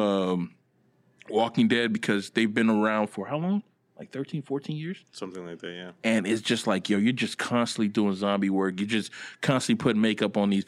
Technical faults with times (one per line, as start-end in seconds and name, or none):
none